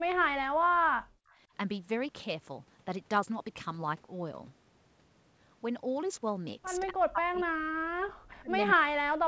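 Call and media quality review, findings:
Speech suppressed in double talk, 0.0 to 1.22 s: level ducks hard, deepest dip about 40 dB, roughly a second chopped. Likely the echo canceller mistaking overlap for echo and clamping the near talker.

Same at 6.91 to 7.88 s (about a second affected) and 8.22 s to the end. Dips around 40 dB, gappy, both while the far side talks over.

Echo leak, 1.28 to 1.33 s: a faint scrap of the voice returning about 237 ms late, roughly 40 dB down.

Short, just a brief ghost tail after the suppressed stretch. Likely a loudspeaker-side canceller not fully removing what its mic picked up.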